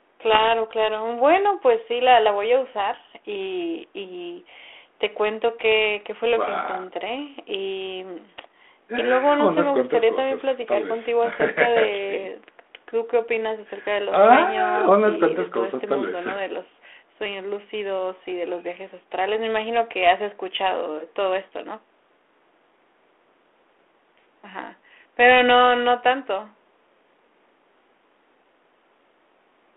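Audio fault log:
0.32–0.46 s, 11.33–11.49 s and 20.57 s, bit errors on an ADPCM link: a few flipped bits knock the decoder's step size and predictor off track, so each error rings on for milliseconds, heard as pops, rough bursts and brief level jumps over the narrowband line.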